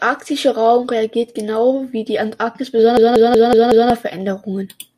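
A system hang loop runs from 2.97 s to 3.90 s: the driver or computer stalled while the sound hardware kept replaying the same ring buffer. One 186 ms slice of the speech repeats exactly five times, about 5.38 times per second, which fits an 8192-sample buffer. It sounds like a choppy machine-gun stutter, and roughly a second of the real audio is lost before normal playback returns.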